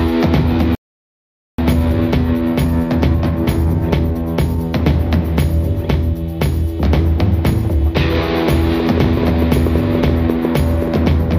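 A playback stall runs from 0.75 to 1.58 s. The sound stops in mid-flow and the output stays silent for about 0.83 s before picking up again. The likely cause is the player running dry of data or having its processing thread blocked, so nothing reached the output until it recovered. The gap is long enough to hear clearly as a dead break rather than a brief dropout.

Time-compressed catch-up follows directly, from 1.58 to 4.58 s. Having fallen behind during the stall, the player works off its backlog by trimming out small pieces of audio and cross-fading across the joins. For these three seconds the audio runs at about 1.15 times normal speed. It sounds hurried while the pitch stays where it should, which marks this as splicing rather than simply playing faster.

A train of clicks runs from 8.8 to 10.97 s. Around fifteen pulses of much the same shape are added over the sound at roughly 6.5 per second, spaced unevenly rather than to a steady beat. 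They stand out at around 10 dB above the underlying audio and are heard as ticking or popping. Such a train likely comes from electrical interference from nearby equipment or from a faulty connection or power supply.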